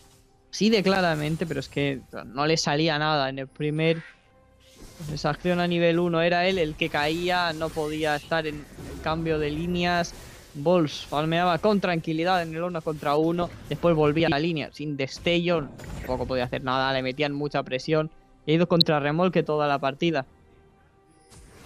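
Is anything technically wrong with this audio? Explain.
Yes. Two kinds of fault are audible.

DAB burbling appears five times: at 6.81 s, 9.54 to 9.57 s, 13.38 to 13.52 s, 15.81 to 16.06 s, and 18.80 s. Weak reception let bit errors slip past error correction into the MP2 audio. The error rate is a small fraction of a percent. Corrupted samples put short blips of noise in single sub-bands, and corrupted scale factors make sub-bands jump in level for up to a frame. The result is brief blips over the sound. The longest burst is at 15.8 s.

Chunks out of order occur twice, from 8.64 to 8.76 s and from 14.20 to 14.32 s. In each, a 40 ms chunk arrived late. It plays two chunks after where it belongs. No audio is lost, but the sequence is scrambled across 120 ms. That leaves three hard joins. Each moment sounds jumbled.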